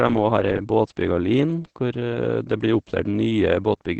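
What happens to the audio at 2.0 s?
At 2.0 s you're hearing the Opus voice compression that runs through the whole clip. At around 12 kbps it's using the SILK coder, band-limited to about 8 kHz, with the excitation coded coarsely, so the speech comes out muffled, a bit hoarse and faintly robotic.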